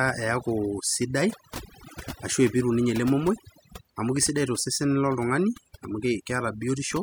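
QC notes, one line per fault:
throughout: overdone noise removal. The background drops and breaks up into twinkling specks. Noise reduction set too hard keeps pulling individual frequency bands down whenever they sit close to its noise estimate, taking the quieter parts of speech with them.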